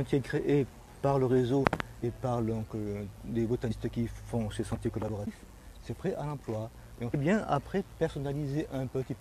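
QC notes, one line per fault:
2.02 s, compressed frames skipped: about seven 23.2 ms frames drop out, so roughly 150 ms of audio vanishes.
3.69–3.71 s, compressed frames skipped: around five frames missing, a jump of roughly 100 ms.
7.13 s, compressed frames skipped: a run of about thirty frames lost, skipping roughly half a second of audio.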